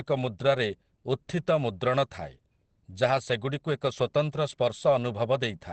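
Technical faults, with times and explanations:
Throughout, Opus compression: the speech sounds muffled and hoarse, with nothing above 8.5 kHz and heavy coding damage. This is likely Opus in its SILK speech mode with wideband bandwidth, and the sound fits a starved rate of about 12 kbps.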